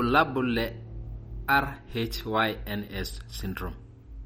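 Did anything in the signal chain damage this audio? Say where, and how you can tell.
Yes. The damage is at the codec stage throughout the speech, which sounds watery and swirly, likely from MP3 compression at a bitrate near 48 kbps. A spectrogram shows a hard cut-off at 16.5 kHz, with weak bands flickering on and off frame to frame as the encoder drops them.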